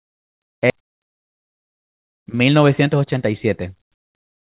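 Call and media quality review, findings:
Skip ahead, 0.70–0.72 s: a queued stretch of about 0.7 s was dropped, leaving no fill. Playback jumps forward almost seamlessly, abruptly splicing the audio either side of the cut, with the missing material simply gone.

Jitter buffer speed-up, 0.79–3.14 s: buffer over target after the jump, so repeated pitch-period removal drained it, cutting roughly 150 ms in total. Sound runs at 106% speed with pitch unchanged, audibly hurried through this span.

Narrowband call path, nothing above 4 kHz, consistent with G.711 mu-law at 64 kbps.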